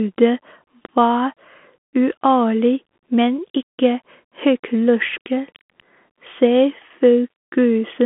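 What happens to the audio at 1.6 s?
Bluetooth CVSD headset codec damage is present at 1.6 s, as it is for the whole clip. The codec sends one bit per sample, up or down, with an adapting step size, and the sound fits a 64 kbps CVSD link. The speech is confined to a band of roughly 200 Hz to 3.5 kHz, with nothing above 3.8 kHz. The damage is plainly audible: s sounds come out scratchy, loud high-frequency parts distort as they outrun the step size, and a granular hiss sits under the voice.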